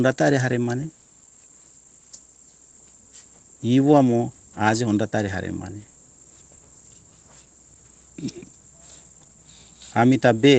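No technical faults can be heard anywhere in this speech clip.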